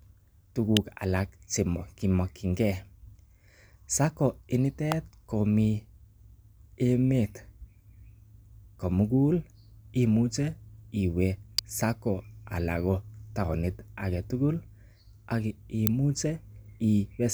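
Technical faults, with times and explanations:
0.77, 4.92, 11.58 and 15.87 s: electrical switching spike, four sharp snaps over the speech peaking near -5 to -10 dBFS, likely arcs from a nearby switch or motor coupling into the line.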